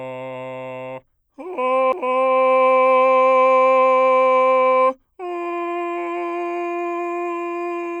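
A CD skip at 1.92 s: the laser jumped to another turn of the disc's spiral, leaving a tick, a mute of a few milliseconds, and an abrupt jump in the music.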